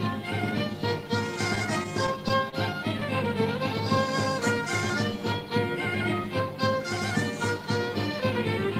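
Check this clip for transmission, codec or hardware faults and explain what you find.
One fault is audible: repeated stalls (stutter) between 1.55 and 2.54 s. Packets arrived late, so the jitter buffer ran dry seven times. Each pause, none longer than 30 ms, was filled by extending the preceding sound, about 89 ms in total. Unlike packet loss, nothing goes missing. The audio drags and hiccups instead of dropping out.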